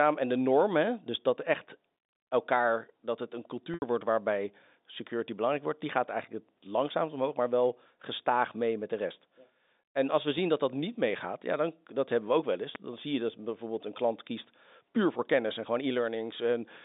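At 3.74 s, just after "elkaar dat het een", there's packet loss with pitch repetition. About 80 ms of audio goes missing, which fits four 20 ms packets. The receiver loops the last pitch period, so you get a brief buzzy hold that fades nearly to silence before "wordt waarbij security belangrijk" cross-fades back in.

Then there are two loud pops, each a single sharp click lasting under 30 ms, with the sound carrying on underneath. The first is at 10.37 s, after "als we", and peaks well above the signal, roughly 15 dB. The second is at 12.75 s, after "we ook wel eens", and is a bit softer at around 10 dB. A sudden voltage spike, likely from a switch, a connector or static, fits both. The whole clip also comes over a G.711 telephone line, so nothing above about 3.7 kHz is there.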